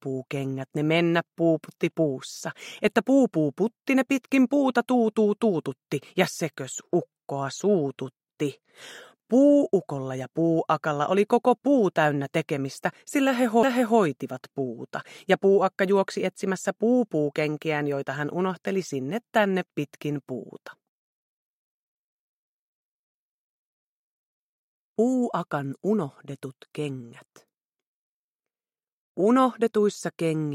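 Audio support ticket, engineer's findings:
Tick at 13.63 s, brief dropout of a few milliseconds, then the audio resumes from a different point, with continuity broken. CD skip. Probable component: disc drive, laser pickup tracking. A knock or disc flaw threw the laser onto another turn of the spiral. Player muted momentarily, then continued reading from there, displacing the audio by one or more disc revolutions.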